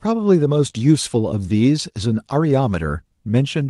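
The sender's clock runs roughly 1.5 percent slower than the receiver's, so this is clock drift between sender and receiver: the jitter buffer keeps draining throughout the speech, forcing playback to make up time, which shows up as a faintly uneven, stretched pacing.

From 0.22 s to 3.28 s the receiver makes repeated timing corrections, repeating short pieces to fill the shortfall. The stretch plays at 99 percent speed, adding roughly 50 ms in total, heard as slight hiccups and a tempo that drags unevenly through the Opus-coded, 12 kHz-limited audio.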